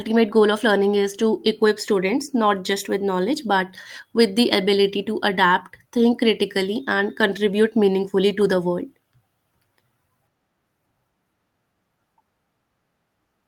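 No technical faults can be heard anywhere in the recording.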